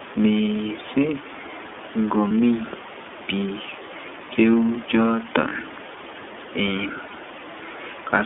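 The iLBC codec shapes the whole clip. This narrowband VoIP coder squeezes the speech into a line band of roughly 200 Hz to 3.5 kHz. It codes each 30 ms frame independently, which points to the 13.33 kbps mode. Everything above the band is gone, so the speech sounds boxed-in and telephone-like, and the coding damage is plainly audible as a rough, slightly synthetic grain on the voice.

Lost iLBC frames appear three times, from 2.28 to 2.31 s, 5.48 to 5.53 s and 7.07 to 7.12 s, each a single missing 30 ms frame. At each gap the decoder fills the hole by repeating the last pitch cycle blended with noise, so there is a brief held, faintly buzzy vowel-like smear. Because iLBC frames stand alone, the speech snaps back cleanly straight afterwards.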